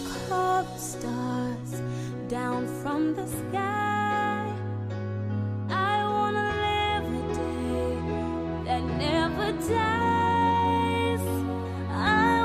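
No technical faults can be heard anywhere in the clip.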